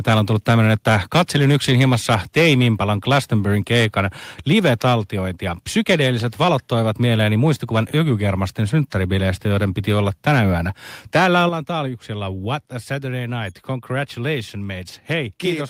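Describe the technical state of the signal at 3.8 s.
At 3.8 s the speech has a harsh, crackling edge from microphone overload, spanning 3.09 to 4.0 s: input gain likely sat about 6 dB too high, flattening the peaks on roughly 2% of samples.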